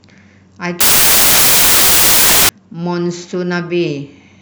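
From 0.81 s to 2.49 s the speech is replaced by loud, harsh broadband noise, the signature of samples built from the wrong bytes. The reader misassembles each sample, so the rapidly changing low-order bits land in the high-order position, and noise dominates.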